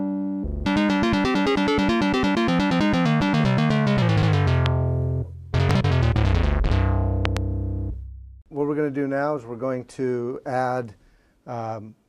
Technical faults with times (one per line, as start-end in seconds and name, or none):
4.66-4.68 loud pop
5.71-5.73 loud pop
7.25-7.39 loud pop